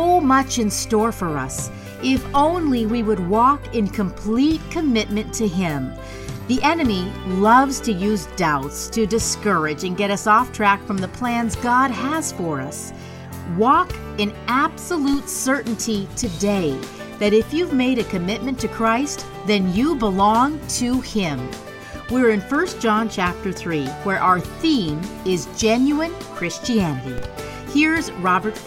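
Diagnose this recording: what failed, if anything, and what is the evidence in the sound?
The converter stage looks like the culprit: there's a DC step, a sudden jump in the waveform's zero line, at 2.36, 6.58, 15.14 and 27.18 s. Each one lands as a dull low thump while the sound carries straight on. The offset is about -18 dBFS, and it bleeds away quickly, the way a 5 Hz high-pass would drain it over a few tens of milliseconds, so you get a transient thud rather than a lasting shift.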